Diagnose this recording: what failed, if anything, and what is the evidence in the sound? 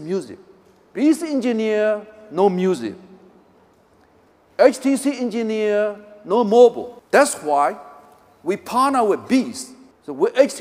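Pre-emphasis left on, at the playback stage, from 6.47 to 9.62 s. Over that stretch the sound turns thin, bright and hissy, with the top end about 8 dB hotter at 10 kHz than at 1 kHz. The lift follows the CD 50/15 µs curve, so the matching de-emphasis was skipped when the audio was reproduced. A deliberate treble EQ would rarely switch on and off mid-clip. This lift tracks that fixed standard shelf rather than an arbitrary boost.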